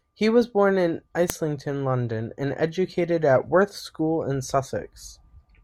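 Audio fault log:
1.30 s, file header played as audio: there's a sharp, loud snap right there in the speech. It sounds like a second WAV piece was joined on with its header left in, so those few dozen header bytes get played straight out as samples.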